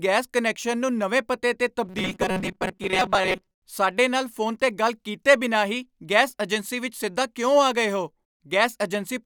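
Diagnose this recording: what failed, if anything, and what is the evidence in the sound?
From about 1.85 to 3.55 s the speech turns into a rigid, metallic buzz pitched at 188 Hz: robotic sound from repeated short buffers. That's likely a buffer underrun at the driver, replaying a roughly 5.3 ms chunk while about half the real audio gets skipped.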